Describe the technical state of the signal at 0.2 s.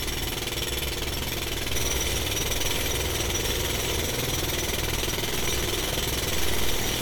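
At 0.2 s the audio is intact, with no technical fault present at that moment.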